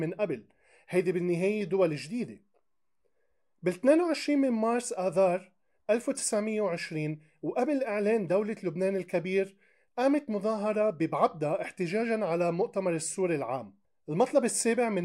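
No technical faults can be heard anywhere here.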